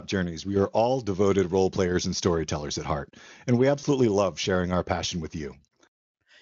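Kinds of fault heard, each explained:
VoIP packet loss concealed by the speech codec: at 3.79 to 3.84 s, between "at heart and we" and "love sharing our passion", 40 ms goes missing, fitting two lost 20 ms frames; the decoder extends its last pitch and spectral shape at falling gain, producing a brief stretched, fading sound.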